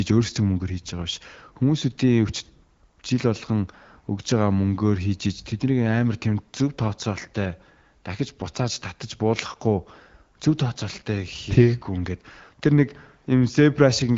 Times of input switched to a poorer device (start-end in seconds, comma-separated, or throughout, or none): none